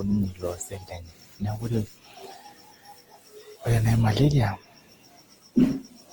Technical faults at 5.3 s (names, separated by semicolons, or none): generation loss